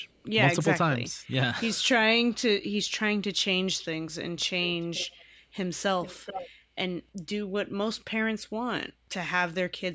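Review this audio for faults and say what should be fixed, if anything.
Echo leak at 0–0.24 s (very faint), 4.64–5.25 s and 6.02–6.49 s (about 15 dB and 10 dB below the speech): a copy of the speech trailing by 0.45 s and 0.43 s, likely from a loudspeaker-side echo canceller leaving residual pickup. Prevent it with a headset or a better-converged echo canceller on the far end.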